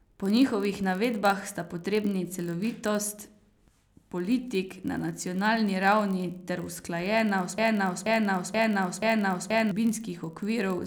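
From the very start there's a steady buzz at about 43.1 Hz running under the whole speech clip. That's a block size mismatch (padded): one stage hands over blocks slightly shorter than the next stage reads, and the shortfall gets filled with zeros, so every block carries a tiny silent gap. The buzz rate fits a 1024-sample read block. Because the missing slice is so small, the speech is slowed only to 0.999 times normal, so the pace and pitch sound unchanged.

At 7.58 s things lock up into a broken-record loop. A piece about 480 ms long plays four times back to back, identical each time, until 9.71 s. The cause is likely a stall somewhere in the player, encoder or stream, which kept resending the last fragment it was holding. Whatever speech should have played across those two seconds is simply gone, replaced by the stuttering repeat.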